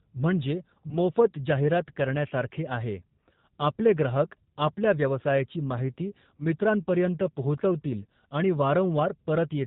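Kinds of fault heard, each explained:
G.729 codec: The speech sounds dull and boxed in, with nothing above 4 kHz and a slightly rough, synthetic edge that is plainly audible throughout. This is the G.729A codec, at a level of damage that fits 8 kbit/s. It does not store the waveform. It rebuilds each 10 ms frame from a vocal tract filter, a pitch predictor and a few pulses, so fine detail and high frequencies are lost.
VoIP packet loss concealed by the speech codec: Brief smeared, held-over patches interrupt the speech. One runs from 0.87 to 0.98 s, just before "जाहिरात करण्यासारखे आहे", and a shorter one runs from 6.38 to 6.42 s, right after "ग्राहक आपल्या व्यवसायाची माहिती". Packets were lost, about 20 ms and then 10 ms of audio. The decoder filled each gap by stretching its last pitch and filter and fading them, and because each frame builds on the previous one, the disturbance outlasts the gap itself.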